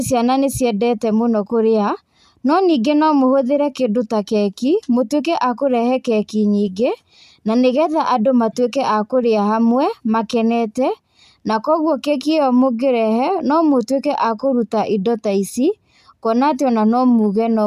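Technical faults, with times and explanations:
No technical faults can be heard anywhere in this recording.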